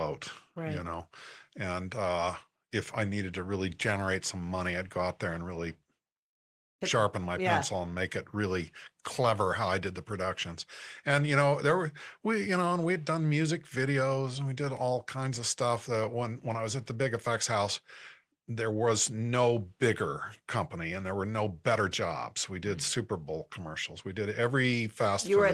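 No technical faults can be heard anywhere in the recording; the signal stays continuous and steady throughout.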